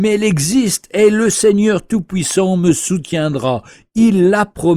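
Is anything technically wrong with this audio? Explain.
Yes. A loud pop hits the speech between 2.31 and 2.33 s, a single sharp thump lasting about 20 ms and peaking a few decibels above the surrounding speech. A sudden voltage step or pulse, likely from a plug, switch, static discharge or driver glitch, was added to the signal, and the following circuitry shaped it into a brief pulse while the speech carried on underneath. On a waveform it shows as a narrow spike standing above the speech envelope; on a spectrogram, a thin vertical stripe spanning all frequencies.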